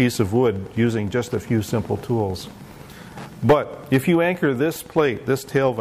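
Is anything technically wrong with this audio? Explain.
Yes. Wi-Fi interference runs throughout: a nearby Wi-Fi radio's beacon, sent every 102.4 ms, is picked up and rectified by the audio circuit. It is heard as a steady ticking just under ten times a second, sitting roughly 25 dB below the sound.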